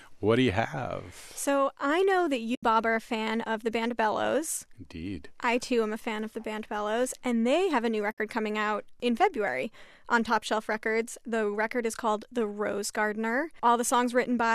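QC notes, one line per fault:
2.55–2.63 s and 8.12–8.18 s: AAC frame loss with muting. The sound drops out briefly after "I know that" and again after "they have a new", returning before "are a fan of" and "coming out in". The gaps last about 80 ms and 60 ms. This fits whole frames of about 10 ms being lost and zeroed by the decoder. Overlapping windows fade the edges, so each hole is soft-edged. The short frames point to the likely low-delay AAC compression, whose coding damage is light.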